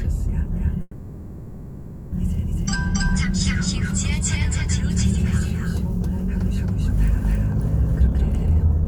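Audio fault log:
throughout, doubled audio track: a full-band copy trails around a third of a second behind at much the same level, likely a second capture path; the waveform shows repeated, undecayed onsets.
0.81–2.14 s, call audio freeze: the sound stalls and a fading buzz fills 1.31 s, then resumes where it stopped, likely from delayed packets; the spectrogram shows smeared, steady bands.
7.88–8.88 s, jitter buffer speed-up: the sound runs at 158% speed with unchanged pitch as about 0.7 s is trimmed; the waveform shows compressed events with intact periodicity.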